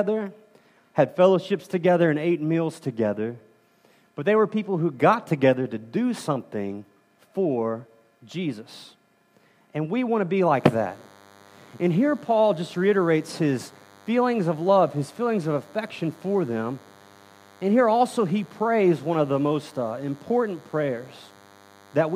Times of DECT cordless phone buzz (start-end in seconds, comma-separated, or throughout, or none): 10.54-22.15